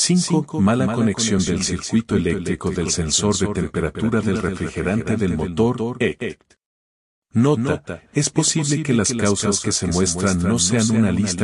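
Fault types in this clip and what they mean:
Doubled audio track: Every sound arrives twice, with a second full-band copy trailing about a fifth of a second behind and sitting around 5 dB lower, so each onset gets a distinct, clean repeat rather than a reverberant tail. The copy carries no decay or room colouring and runs for the whole clip. This likely comes from the same signal being captured again through a slower path and mixed back in.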